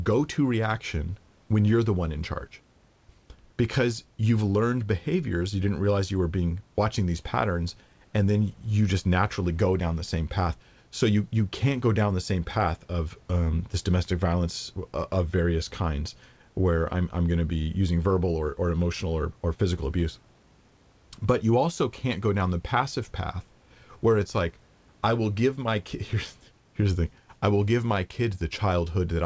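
No technical faults are audible.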